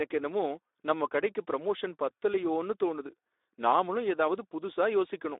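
Throughout the speech, a Speex codec running at a low rate, which fits roughly 11 kbps, starves the excitation signal of bits, so the codec rebuilds each sound from a coarse, noise-heavy source. The damage is plainly audible: speech sounds hoarse and grainy, with a rough, noisy texture. The telephone-style line band adds to the thin sound, passing only about 300 Hz to 3.7 kHz, with nothing at all above 3.8 kHz.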